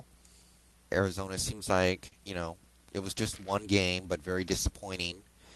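At 2.07 to 2.15 s there is a short stall from a late packet: the jitter buffer ran dry, so the receiver held the last sound for 43 ms until the data arrived. Nothing is lost, but playback slips 43 ms later, heard as a brief held stretch with a slight buzz or dip. The call codec path, consistent with Opus, limits the audio to about 12 kHz.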